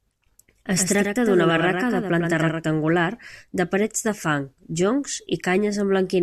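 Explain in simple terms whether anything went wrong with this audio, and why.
From 0.77 to 2.63 s the speech has a doubled audio track: a quieter copy trails about a tenth of a second behind, likely from a second, slower capture path.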